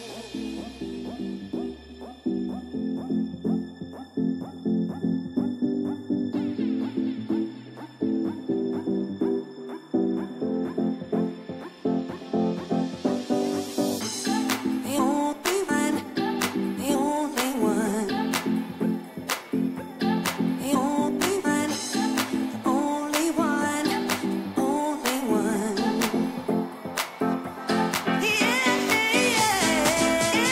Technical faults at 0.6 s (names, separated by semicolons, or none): none